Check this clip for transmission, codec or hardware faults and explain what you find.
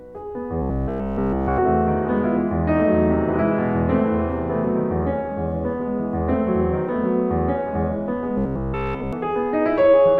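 Two stretches of this music show robotic sound from repeated short buffers, at 0.62–1.60 s and 8.38–9.13 s. Essentially everything is a loop of one chunk of about 15 ms, likely replayed because fresh audio arrived too late. That loop forces a rigid, metallic 66.8 Hz buzz. The waveform shows identical repeating cycles, and the spectrogram shows rigid harmonic lines 66.8 Hz apart.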